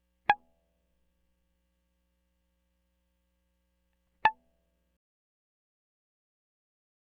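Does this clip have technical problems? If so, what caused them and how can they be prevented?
Yes. From 4.97 to 7.07 s the music's fade-out turns gritty. This is truncation distortion on a fade: no dither, with steps that suggest a 10-bit stage. Keep the fade at higher resolution and apply dither before reducing bit depth.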